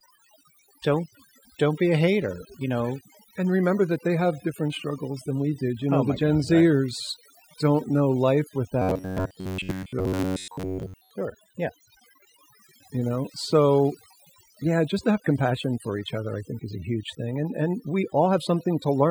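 Overdone noise removal runs through the whole clip. The noise reduction is set so aggressively that frequency bands near the noise estimate are cut almost to nothing, taking quiet parts of the speech with them. The background drops and breaks up into twinkling specks.

From 8.82 to 11.11 s, just after "zers don't know life", there is robotic sound from repeated short buffers. New audio is likely arriving too seldom, so the last stretch of about 11 ms is replayed over and over for most of this span while the real audio is skipped. That repetition forces a fixed 93.8 Hz buzz onto the speech, turning it metallic and rigid while still loosely following the words.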